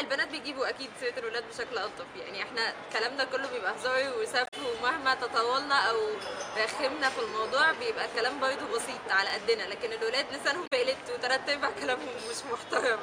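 Damaged data in a compressed stream appears twice, from 4.43 to 4.54 s and again from 10.63 to 10.73 s. In each spot a stretch of the encoded bytes is wrong, so the decoder misreads those frames, loses its place in the stream and has to hunt for the next valid frame header before normal decoding resumes. For roughly a tenth of a second each time, the audio breaks into a short, garbled chirp or blip.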